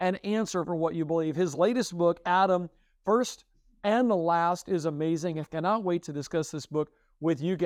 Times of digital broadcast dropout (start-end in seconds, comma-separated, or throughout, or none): none